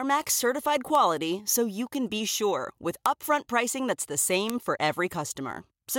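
Sharp ticks at 0.95, 1.95, 3.06 and 4.50 s are bit error spikes: a single flipped bit in one sample jumps the value by a power of two, peaking at about -9, -15, -3 and -3 dBFS. Each shows as a one-sample needle on the waveform and a thin full-height vertical line on the spectrogram.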